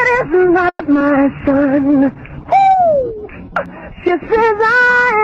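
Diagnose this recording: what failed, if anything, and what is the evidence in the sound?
Network stage: packets were likely held up so the jitter buffer ran dry. From 0.69 to 0.82 s the sound stalls into a fading fill, about 70 ms silent, then resumes, adding a 110 ms gap.

Network and jitter buffer stage: short concealed packet loss at 0.94–0.97 s and 0.99–1.02 s. Each is a brief smear where 10 ms of synthesized fill replaces 20 and 40 ms of lost audio as the buffer catches up.

Codec rate control: a call bitrate drop from 1.39 to 3.60 s, Opus falling from 32 to 14 kbps for about 1.1 s, makes the sound rough and watery.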